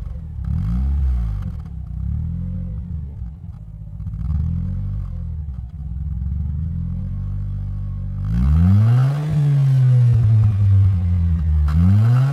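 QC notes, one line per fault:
2.47–12.32 s, time-stretched section: from 2.47 s the pace drops abruptly to about 0.59 times the original while pitch holds steady, leaving the audio dragging to the end. This likely comes from software slowing the section by repeating short slices to preserve pitch.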